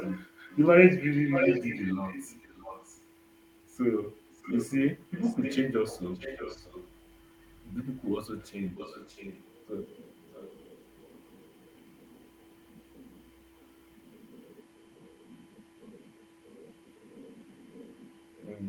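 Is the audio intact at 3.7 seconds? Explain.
Yes, at 3.7 seconds the speech plays through intact, with no dropout, click, distortion or other fault at that moment.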